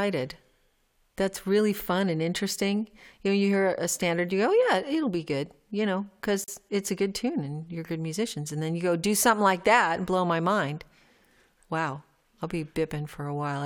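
At 6.44 to 6.48 s, between "be good you know" and "it's a good tune", the speech drops out for about 40 ms: a gap at a join of encoded pieces. Two separately encoded segments were butted together untrimmed, so the encoder's start-up delay and the padded final frame both survive as dead air. The codec smears the edges of the silence, and the speech then resumes exactly where it broke off.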